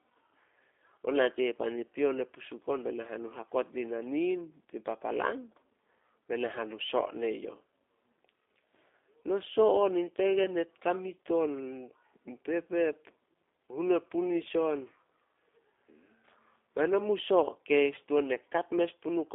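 Speech carried through the G.729 codec throughout: the spectrogram shows energy confined to roughly 300 Hz to 3.6 kHz, with plainly audible rough, synthetic texture from low-bitrate 8 kbit/s pulse-based reconstruction. At 10.44 to 10.47 s, just before "e kamit", VoIP packet loss concealed by the speech codec briefly stretches the last pitch into a fading smear, visible as decaying waveform amplitude, which fits about 10 ms of lost audio.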